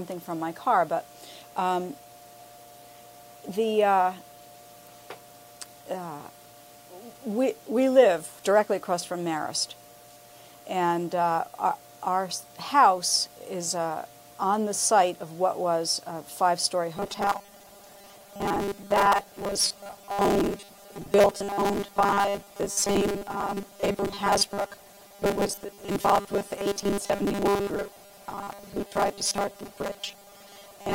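From 16.97 s to the end, the sound turns into a rigid metallic buzz at 200 Hz, robotic sound likely from repeating a 5 ms buffer for most of the time.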